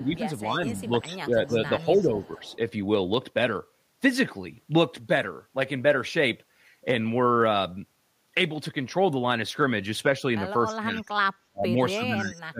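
Speech suppressed in double talk runs from 0.0 to 2.43 s: the speech dips by around 10 dB in pieces, about a second in total, likely because the echo canceller, facing both sides talking at once, turned down the near talker along with the loudspeaker echo. Echo leak appears at 0.71 to 0.87 s and 1.97 to 2.56 s as a faint copy of the speech trailing 292 ms behind, roughly 30 dB below it, likely loudspeaker sound the far end's canceller failed to remove. Speech suppressed in double talk returns at 10.66 to 11.03 s, and echo leak follows at 10.95 to 11.09 s with the same 292 ms delay, somewhat louder at about 25 dB down. From 11.5 s to the end, speech suppressed in double talk cuts deeper than at the start, with drops of around 30 dB, for about 0.7 s in scattered fragments.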